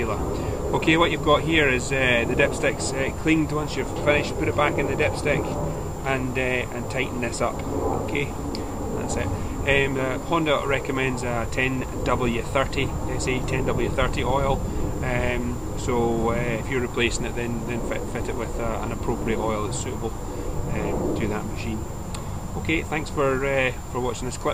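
No technical faults can be heard anywhere in this audio. Nothing in it calls for a time or value to be pointed out.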